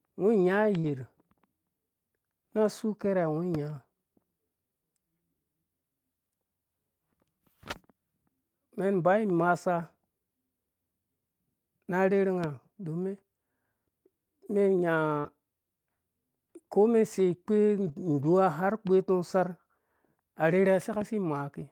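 At 0.79 s, about 40 ms of the speech fails to arrive. This is short concealed packet loss. The decoder extends the preceding sound to cover the hole, then fades back in. It sounds like a brief smear or wobble. The same happens at 15.20 s. In both cases the last 20 ms, from 0.84 s and from 15.24 s, comes back as a lost packet rebuilt from error correction. A low-quality copy carried in the next packet fills that stretch, so it sounds rough and grainy. At 17.80 s to 17.94 s, 80 ms is rebuilt the same way. That fits several lost packets, each recovered from its neighbour. There is no gap, but the sound turns noisier and rougher for that moment.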